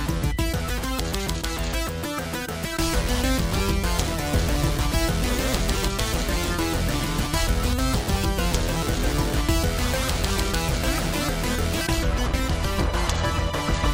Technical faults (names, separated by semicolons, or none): audio missing between chunks